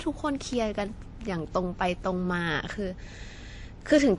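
Throughout, the speech likely went through transcoding between lossy codecs, fitting an MP3 encode near 40 kbit/s re-encoded as WMA near 64 kbit/s. WMA spent bits copying MP3's artefacts and added its own, so both sets of artefacts are heard together, with nothing above 10.6 kHz.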